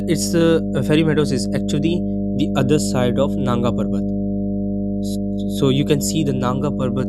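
A steady low 50 Hz drone runs under the speech from start to finish, roughly as loud as the talker: mains hum, power-line current leaking in through a ground loop or nearby transformer.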